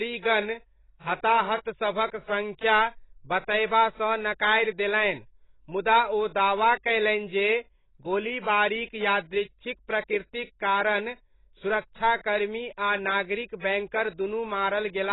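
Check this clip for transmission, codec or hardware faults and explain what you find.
One codec fault runs through the whole speech clip. From start to finish the audio is dull and smeared, with nothing above 3.9 kHz and a warbling, fizzy texture on sibilants and held sounds. This is likely AAC compression: AAC-LC at a very low rate, which fits about 16 kbps, cuts the top band away and quantises the remaining frequency lines coarsely, leaving spectral holes that shimmer from frame to frame.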